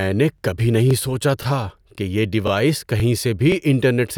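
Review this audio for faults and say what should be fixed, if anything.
Overlapping chunks make the speech stutter at 0.38, 0.91, 1.43, 1.95, 2.48, 3.00 and 3.52 s. Each half-second chunk starts 23 ms early, so that slice repeats. To fix it, align each chunk's start with the previous one's end so no samples get duplicated.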